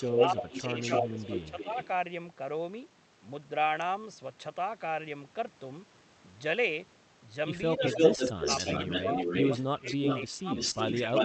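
From 0.0 to 1.87 s there is an echo leak: a second copy of the speech trails about 288 ms behind at roughly the same level. Its likely cause is a far-end loudspeaker whose echo canceller let the pickup through. The repeat is discrete and delayed, not a smeared room tail like reverberation.

Overlapping it, from 0.05 to 1.76 s, the speech is suppressed in double talk. For roughly 0.7 s in total, the near speech ducks by up to about 10 dB. The cause is likely the canceller treating the overlap as echo. The level pumps down while the echo plays.

The same suppression returns at 7.77 to 8.49 s, with shallow dips of about 5 dB covering around 0.2 s.

From 7.79 s to the end a second echo leak runs about 332 ms late, at roughly 5 dB above the speech.

During that echo, suppression deepens. At 9.75 to 10.49 s, about 0.5 s is pulled down by up to about 20 dB. At 11.04 to 11.17 s, a brief dip reaches about 15 dB. 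All of this sits within the Opus call path's 8 kHz audio bandwidth.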